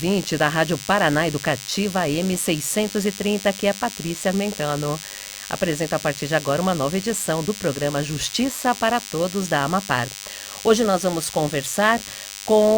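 A DECT cordless phone buzz runs throughout. Radio bursts every 10 ms get rectified, giving a thin, steady 100 Hz buzz with harmonics, roughly 15 dB below the sound.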